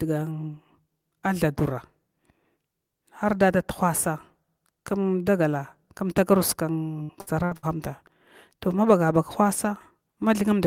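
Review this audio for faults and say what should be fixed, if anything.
Repeated packet loss (robotic sound) from 7.03 to 7.66 s: short holes, the longest 62 ms, are patched by extending earlier sound, giving choppy speech with pieces missing rather than one clean dropout. A larger jitter buffer or more stable network path would prevent it.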